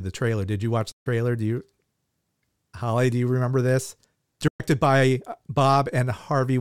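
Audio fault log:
0.92–1.07 s and 4.48–4.60 s, Bluetooth dropout: likely wireless packets arriving too late and being discarded, leaving silences of 139 ms after "you watch" and 116 ms after "you remember this", which fits several lost packets. The speech cuts out sharply and resumes further along, as if it had kept playing.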